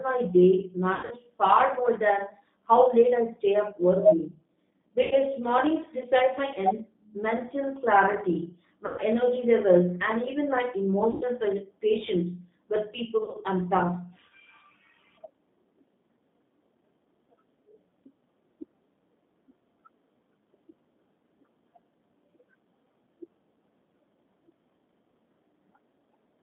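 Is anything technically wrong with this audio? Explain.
Yes. Throughout the clip the speech carries G.729 codec damage: the line is confined to about 150 Hz to 3.6 kHz, and the 8 kbit/s coder rebuilds each 10 ms frame from a vocal tract filter, a pitch predictor and a handful of pulses rather than the actual waveform. That reconstruction is plainly audible here as a slightly rough, synthetic texture, with no content above 3.6 kHz.

There are also five bursts of VoIP packet loss concealed by the speech codec. The first is at 0.95 to 1.16 s, between "my day" and "far more than how", where 140 ms went missing in gaps scattered over 160 ms, the longest run 80 ms. The next is at 5.03 to 5.14 s, about 80 ms. Another falls at 8.86 to 9.01 s, between "mental clarity" and "energy levels and even", about 120 ms. Then 11.11 to 11.24 s, just after "levels and even my", about 100 ms. The last is at 13.18 to 13.37 s, 100 ms scattered over 160 ms, longest run 40 ms. 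The lost amounts fit 20 ms packets. In each gap the decoder keeps extrapolating its last pitch and filter at falling gain, so the sound smears into a buzzy tone or coloured noise that fades. Because each frame builds on the previous one, the speech stays weak and distorted briefly after the packets resume.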